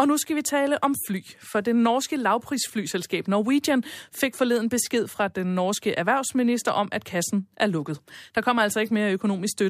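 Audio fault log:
No faults can be heard in this speech recording. There is nothing to log against any point in it.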